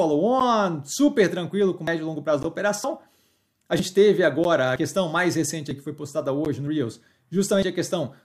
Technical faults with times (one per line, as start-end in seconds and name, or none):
0.40 gap between stream segments
1.87 audio missing between chunks
2.43 gap between stream segments
2.84 audio missing between chunks
4.44 gap between stream segments
5.71 audio missing between chunks
6.45 gap between stream segments
7.62 audio missing between chunks